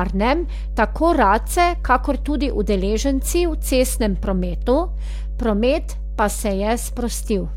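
Mains hum at 50 Hz runs through the whole speech clip, a steady low tone from power-line coupling, likely a ground loop, sitting nearly as loud as the speech.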